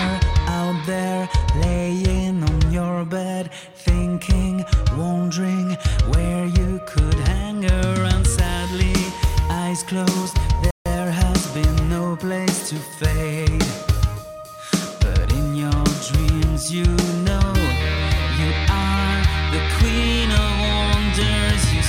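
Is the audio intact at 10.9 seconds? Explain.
Yes. By 10.9 seconds the sound is back, but it has only just come out of a rebuffering stall that ran from about 10.71 to 10.86 seconds. The player ran dry of downloaded audio and went silent for about 150 ms until more data arrived, then picked up exactly where it had stopped. Nothing is missing. You just hear a short gap of dead air, and the clip runs that much longer.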